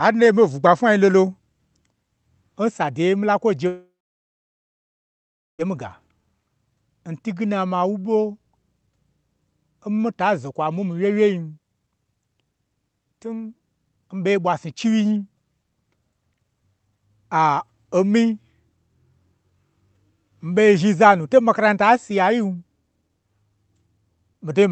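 A long network dropout runs from 3.67 to 5.63 s, right after "sa deye nmila kwoje". The speech stops, and the receiver briefly stretches the last sound into a fading buzz. About 1.7 s of near-silence follows, likely from lost packets. The speech then resumes with that stretch missing. Across the call path, the sound stops above about 8 kHz, consistent with an Opus codec.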